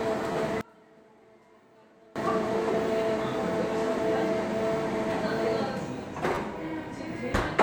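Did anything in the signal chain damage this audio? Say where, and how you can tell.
Yes. At 0.33–0.35 s and again at 6.35–6.37 s, a driver or buffer stage produced a repeated buffer. The same slice of about 11.6 ms plays twice more with hard joins, which fits a 512-sample buffer. The result is a brief buzzy stutter rather than a dropout, because nothing is skipped.

From 0.61 to 2.16 s, one channel is inverted. On a mono sum the centred content drops by about 28 dB, leaving only a faint difference signal. That residue distinguishes it from a fade or mute. The likely stage is analogue wiring with one leg's polarity swapped.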